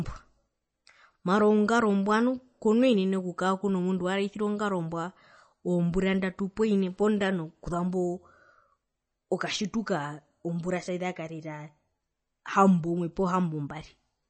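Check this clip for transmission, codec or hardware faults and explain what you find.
One codec fault is present, lasting the whole clip.

Throughout the speech, MP3 compression is plainly audible. The likely cause is an encoder short of bits, which fits about 32 kbps. It cuts treble at a fixed 8.3 kHz and zeroes weak frequency lines that flicker between frames, so the sound turns watery and swirly, s sounds chirp metallically, and attacks smear. A simple low-pass filter would dull the top without the swirl.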